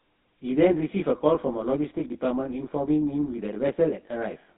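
Channel delay (comb filtering) runs through the whole of this speech clip: one channel arrives around 20 ms behind the other, and when the two are summed to mono, everything they share cancels at regularly spaced frequencies starting near 30 Hz. The result is a fixed set of notches across the spectrum that gives the voice a rough, slightly doubled colour that never moves. GSM full-rate codec damage is also present from start to finish and is plainly audible. The coder rebuilds the voice from a vocal-tract model excited by sparse, regularly spaced pulses, which produces the buzzy, gravelly roughness heard here, consistent with the 13 kbps full-rate scheme. The band is squeezed to roughly 200 Hz to 3.7 kHz, and nothing survives above 3.8 kHz, so the voice sounds narrow and telephone-like. A block of digital silence occurs at 3.34 s. For about 0.73 ms the audio drops out and returns with no fade. 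A gap that short is heard as a brief tick rather than a hole, caused by the abrupt edges on either side, most often the result of an output buffer not being filled in time.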